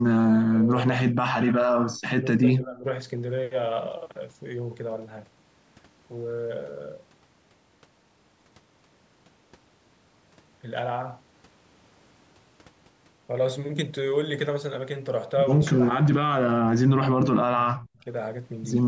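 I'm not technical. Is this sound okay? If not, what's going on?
No. From 0 to 1.6 s, 2.2 to 2.85 s and 15.73 to 18.06 s the speech fades or partly vanishes, likely speech suppressed in double talk: both sides talking at once, so the call squeezed this voice down rather than cutting it cleanly like a dropout.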